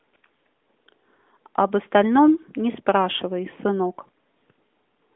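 No technical faults turn up anywhere in this speech clip. The AMR narrowband mobile codec path is audible as a phone-line band running from about 200 Hz to 3.5 kHz with nothing above it, and at 12.2 kbps its coding leaves only light damage on the speech.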